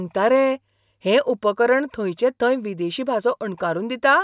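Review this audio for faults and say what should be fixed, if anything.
Nothing needs fixing, as the speech signal is continuous and shows no technical faults at any point.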